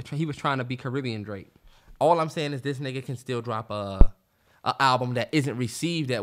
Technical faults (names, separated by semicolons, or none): phantom power thump